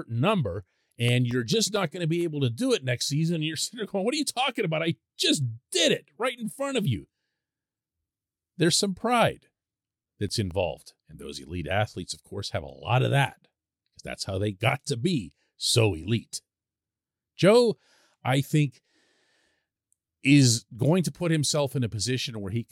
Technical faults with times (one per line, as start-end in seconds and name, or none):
0.41-2.21 CD scratch ticks
9.61-10.51 CD scratch ticks